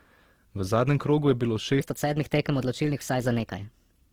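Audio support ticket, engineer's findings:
Opus compression throughout: grainy, rough texture on the speech, full bandwidth up to about 20.3 kHz. Likely Opus music mode starved of bits, which fits roughly 16 kbps.

Section at the wrong speed from 1.80 s to the end, right after "je bilo": speech 1.23x faster, pitch up about four semitones. Likely a playback or edit step on the wrong clock.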